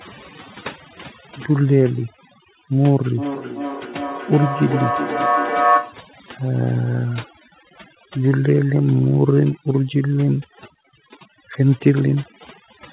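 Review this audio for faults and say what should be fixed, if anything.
Throughout the speech, the background sinks to near silence dotted with twinkling specks, and the voice has its quieter edges hollowed out. That is overdone noise removal: the reducer was set so aggressively that any frequency band falling near its noise estimate gets pulled far down or shut off, and the softer parts of the voice go with the noise. Prevent it by backing off the reduction strength and floor.

From 3.18 to 6.12 s, each stretch of speech comes back at a steady interval of roughly 0.4 s, each return thinner and more ringing, and at its loudest the repeats sit only about 2 dB below the direct speech, so they stack up rather than fade. This is feedback echo between two devices: a second device in the same room replays what the first microphone sent, that microphone picks it up again, and neither echo canceller can remove sound played by the other device. 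Prevent it by keeping only one device joined to the call in each room, or muting the extra one's speaker and microphone.

The narrow band, with nothing above 4 kHz, fits a G.711 A-law call path.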